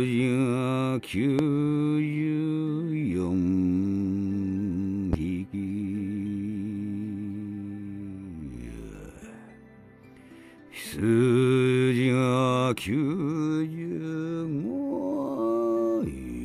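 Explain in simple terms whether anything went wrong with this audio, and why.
Two loud pops break in, at 1.39 s and 5.13 s, each a single brief jolt well above the surrounding level. Each loud pop is likely an electrical surge from a plug or switch. Unlike a dropout, the sound carries on underneath, uninterrupted.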